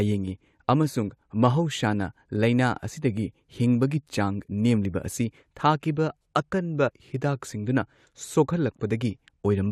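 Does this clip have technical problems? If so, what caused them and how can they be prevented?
Yes. Compressed frames were skipped from 6.88 to 6.90 s: about one frame, roughly 20 ms of speech, never plays, and the audio jumps ahead. The 23.2 ms frame length fits a 1024-sample codec frame at 44.1 kHz, and the frame was missing or rejected as damaged. Using reliable transfer with checksums and error-protected storage prevents this.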